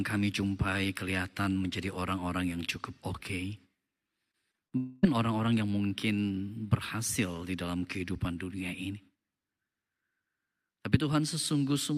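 From 4.31 to 4.73 s, repeated packet loss (robotic sound) breaks the speech with four short gaps, the longest 37 ms, each patched by repeating the preceding sound. It turns choppy. A spectrogram shows smeared, repeated slices where fresh detail should be.

At 4.77 s a long dropout sets in, likely a network dropout, lasting until 5.05 s. The whole missing quarter-second is filled by stretching the last sound into a fading buzz with no true silence. On a waveform this shows as a smooth, decaying tone before speech resumes.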